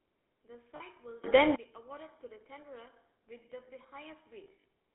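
Throughout, the GSM full-rate codec gives the speech a buzzy, gravelly roughness within a 250 Hz to 3.6 kHz band, consistent with a 13 kbps stream. Lost GSM frames at 0.76–0.81 s and 4.44–4.65 s are bridged by repeating the last good frame, producing brief metallic rings, the second in short, scattered runs.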